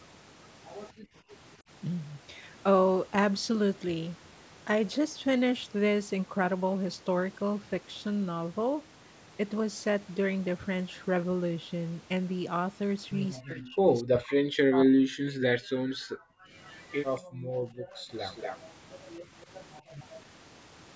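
At 0.93 s the room tone behind the speech dips by about 25 dB for roughly a third of a second, until 1.25 s. This is background gated by the echo canceller: while the far end was playing through the loudspeaker, the canceller pulled the microphone down hard and released it a moment later.

From 13.39 to 15.32 s the talker's own speech is pushed down deeply, in pieces adding up to about a second and a half. The likely cause is speech suppressed in double talk. With both sides talking at once, the canceller could not tell the local voice from loudspeaker echo and attenuated everything it heard.

Gating returns right after, from 15.61 to 16.51 s, with the background falling by about 40 dB for most of that stretch. At 16.65 to 17.2 s a faint delayed copy of the voice appears, trailing by 0.23 s and far below the direct speech. This is likely echo leak, residual loudspeaker pickup that the far side's canceller failed to remove and sent back. 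Another gated stretch follows at 17.21 to 18.08 s, dropping about 39 dB. The echo returns at 18.17 to 18.6 s with the same 0.23 s delay but noticeably louder. A last brief dip of about 12 dB at 19.87 s lasts only around 50 ms.

Throughout, the audio stops at 8 kHz, consistent with normal call microphone processing.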